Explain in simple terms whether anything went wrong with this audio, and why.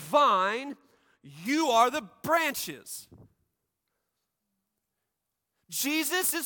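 From about 1.46 s to the end at 6.45 s, this speech has pre-emphasis left on. The treble was deliberately boosted for transmission, matching the FM broadcast curve, but the cut that should undo it was never applied, so the sound turns thin, bright and hissy on sibilants.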